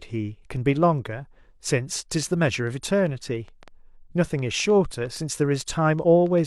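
From 2.23 s to 6.39 s, an uneven ticking runs over the speech: around twenty sharp pops, roughly four per second at irregular spacing, each about as loud as the speech itself and just as clear in the pauses. This is a train of clicks, near-identical pulses added to the signal from outside it. The likely source is electrical interference from nearby equipment or a faulty connection or power supply.

Between 5.99 s and 6.04 s, inside that ticking stretch, a brief glitch cuts through. This is damaged data in a compressed stream. Part of the encoded stream there was corrupted, so the decoder misread those frames, lost its place, and searched for the next frame header it could lock onto, leaving a short glitch.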